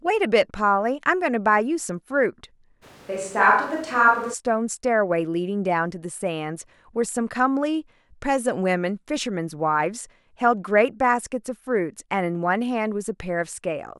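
From 2.84 to 4.32 s the voice suddenly turns roomy and hollow, with thinner bass and background noise about 30 dB below the speech, though loudness holds steady. It then snaps back, likely a switch to a distant microphone.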